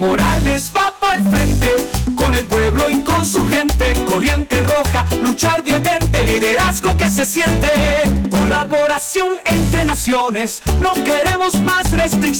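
From start to finish the signal is driven into a stage that cannot pass its full level, about 12 dB beyond what it can carry, so hard clipping flattens every peak. Roughly a fifth of the waveform sits pinned against the ceiling, and those squared-off tops generate harmonics far above the original content. The result is a harsh, buzzing fuzz riding on every louder moment of the sound, not just occasional crackles.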